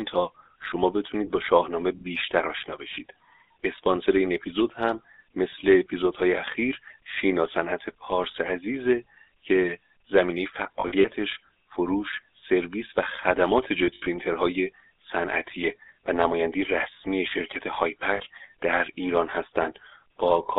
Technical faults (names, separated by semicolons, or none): GSM full-rate codec; lost GSM frames